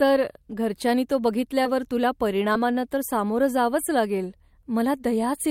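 Short concealed packet loss at 2.53–2.57 s: 20 ms arrived too late, so the receiver extended the preceding sound, leaving a brief smear just before "तर सामोरं".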